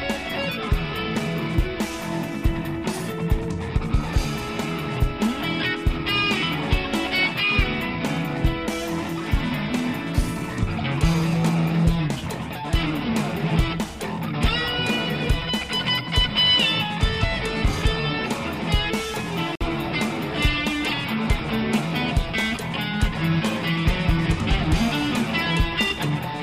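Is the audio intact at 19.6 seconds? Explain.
No. From 19.55 to 19.62 s there is a corrupt frame decoded: flipped bits in the compressed data were played back anyway, so misread gains and codes threw energy into the wrong frequencies. The roughly 70 ms span points to about two damaged frames. It sounds like a brief chirp, squeak, blip or burst of noise, peaking around -10 dBFS. On a waveform it is a brief spike. On a spectrogram it is a short block of misplaced energy with hard edges at the frame boundaries.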